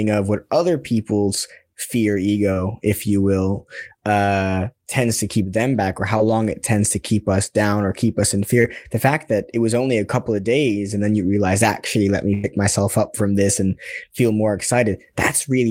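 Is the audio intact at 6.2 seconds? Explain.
No. Short concealed packet loss at 6.17 to 6.21 s: about 20 ms of speech arrived too late to decode. The receiver extrapolated the preceding sound to cover the gap, then blended back, leaving a brief smear or wobble.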